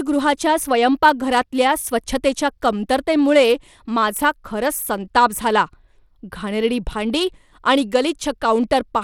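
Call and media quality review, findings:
Gritty, plainly audible coding noise on the speech throughout; nothing above 17.5 kHz. Likely Bluetooth SBC compression: a small bit pool starves the upper sub-bands, and coarse quantisation adds grit and aliasing. Damage level fits a bitrate near 96 kbps.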